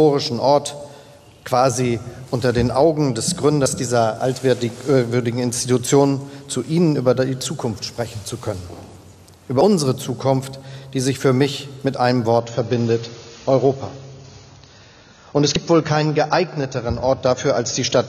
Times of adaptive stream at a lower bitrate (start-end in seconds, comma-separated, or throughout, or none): 12.40-18.09